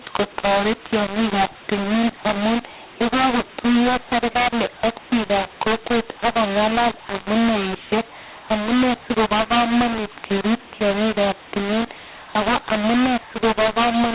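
Telephone speech, and it is harsh and distorted from start to finish. The fault is mu-law and A-law mixed up. Audio coded with the mu-law curve is being decoded as A-law, so each byte maps to the wrong level. Loud and soft parts come out scrambled and grainy. The quietest samples are pushed well above silence, so the pauses fill with noise. The narrow band tops out below 4 kHz, which fits G.711 coding at 8,000 samples a second.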